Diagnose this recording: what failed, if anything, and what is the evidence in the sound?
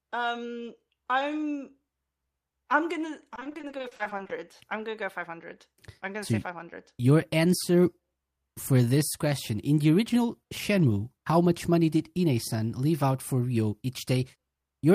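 The network stage failed, with repeated packet loss (robotic sound) from 3.35 to 4.31 s. It begins right after "I'm gonna" and clears before "I'm gonna go". The speech turns choppy there. Many short holes follow one another, none longer than 40 ms. The receiver patches each by stretching the last sound, covering about 400 ms in all, roughly 42% of the stretch. The repeated fills give the robotic texture.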